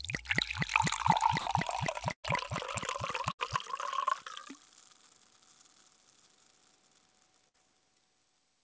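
Bursts of packet loss at 1.40–1.48 s, 2.12–2.26 s (fading to silence), 3.32–3.41 s and 7.49–7.64 s: the receiver stretched and faded the last sound, then skipped ahead, dropping 60–120 ms each time, through an 8 kHz-limited G.722 call path.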